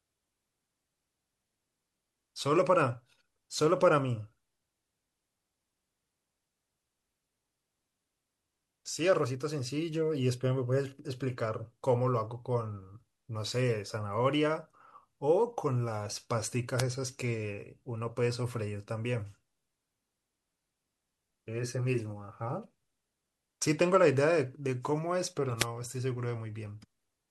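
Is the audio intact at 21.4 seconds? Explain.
Yes, at 21.4 seconds the speech is intact, with no dropout, click, distortion or other fault at that point.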